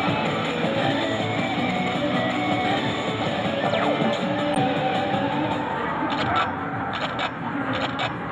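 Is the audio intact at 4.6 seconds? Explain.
No. Just before that point, from 4.55 to 4.58 s, a corrupt frame was decoded. The burst lasts about 30 ms, roughly one compressed frame. Flipped bits inside that frame led the decoder to misread its gains and codes. It still played the frame, so energy landed at the wrong frequencies for that frame's duration. The result is a short chirp, squeak, blip or burst of noise. Its error peaks near -10 dBFS.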